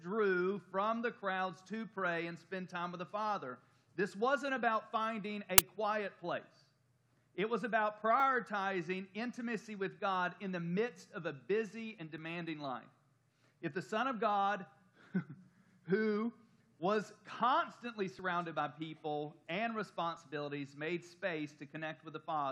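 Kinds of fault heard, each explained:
Uninitialised buffer: A block of output memory was sent to the player before any audio had been written into it, so whatever stale data sat there was played back as if it were samples. Here the block is 10 ms long, and at 5.58 s it produces a sudden, loud crack that has nothing to do with the surrounding sound and stops as abruptly as it starts.
Overlap between stream segments: The audio arrives in 2.0 s segments whose time stamps overlap, and the player trims the supposedly duplicated stretch even though that material was never actually repeated. Between about 12 and 16 ms of genuine sound goes missing at each affected boundary, so the waveform jumps. This is heard as a small click or skip at 8.20 s, 12.18 s, 18.19 s and 20.17 s, each on a segment boundary.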